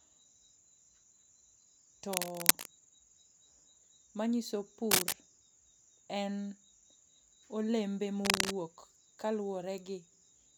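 Three bursts of cable scratch noise cut across the speech, from 2.12 to 2.67 s, from 4.91 to 5.13 s and from 8.25 to 8.51 s, each sitting around 5 dB above the voice. They sound like dense, ragged scratching, most likely from a worn cable or connector being moved so its contact resistance flickers. Unlike a single click or a steady hiss, each burst is irregular, lasts a fraction of a second and then stops.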